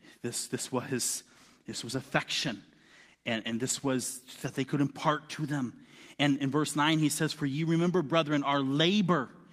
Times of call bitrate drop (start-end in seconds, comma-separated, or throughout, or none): 0.99-4.89